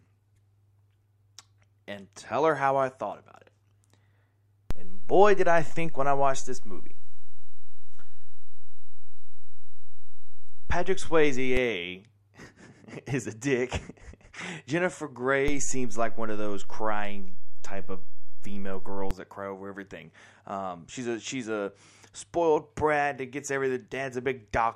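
Low thumps at 4.71 s and 11.57 s, then at 15.48 s and 19.11 s just before "that cry over everything", mark two DC steps. The waveform's zero line jumps by about -17 dBFS and later returns while the speech carries on unchanged.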